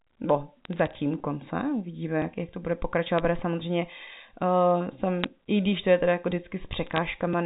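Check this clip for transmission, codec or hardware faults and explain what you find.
Bit errors on a digital phone line show up in four short bursts, at 0.65 to 0.95 s, 3.18 s, 5.24 s and 6.87 to 6.98 s. Flipped bits each corrupt single samples of the G.711 A-law stream. With error rates around a few tenths of a percent, sign or high-order hits produce sharp ticks and brief crackle laid over the unchanged speech. The band-limited telephone coding itself carries only faint quantisation noise.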